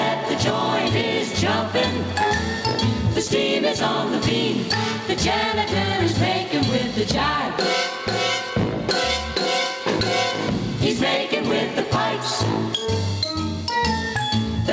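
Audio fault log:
Throughout: gain pumping. The gain swings by about 10 dB, and loud and soft passages sit squashed close together in level. The likely cause is input gain set far too high with a fast limiter clamping each peak. Unlike a noise gate, the floor never cuts to silence. The call path's 8 kHz ceiling is separate.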